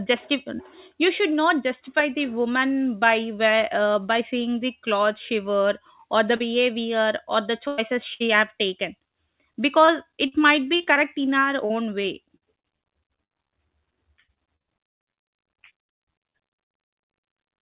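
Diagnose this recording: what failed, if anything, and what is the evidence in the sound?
Brief smears at 6.36 s, right after "she wore or the", and at 9.08 s, just after "have taken", each with a sliver of sound gone. This is short concealed packet loss: roughly 40 ms and 20 ms never arrived, and the receiver bridged each hole by extending the preceding sound.

At 7.68 to 7.80 s and 8.14 to 8.22 s, just before "have taken", the sound stalls into a held buzz or fading tail, then jumps ahead. These are bursts of packet loss at the network stage, about 100 ms and 60 ms lost, filled with decaying continuation.

From 9.86 to 10.98 s, 11.66 to 13.54 s and 14.24 to 16.94 s the audio turns choppy with pieces missing, worsening each time. This is repeated packet loss: 5, then 10, then 17 gaps, the last up to 110 ms, about a fifth concealed, over a narrowband path with nothing above 4 kHz.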